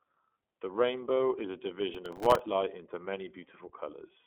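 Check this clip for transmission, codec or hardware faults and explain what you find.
Two faults are audible: codec damage across the whole speech clip and a short burst of overload crackle near the middle.

iLBC codec, throughout: each 30 ms frame is coded independently, removing everything above 3.8 kHz and leaving speech band-limited, slightly rough and synthetic, which fits the 13.33 kbps mode.

Processor overload crackle, 1.95 to 2.39 s: around twenty buffers, each a millisecond or two long, missed their deadlines and replayed stale audio, producing gritty, hard-edged tearing over the speech.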